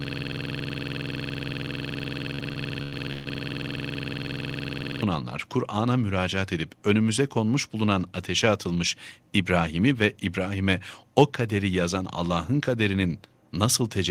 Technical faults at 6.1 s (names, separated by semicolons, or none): none